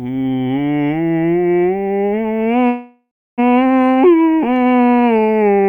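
A music clip with a call audio freeze from 2.67 to 3.40 s: the sound smears into a fading buzz, then about 0.3 s of silence. It resumes where it stopped, likely from delayed packets draining the jitter buffer.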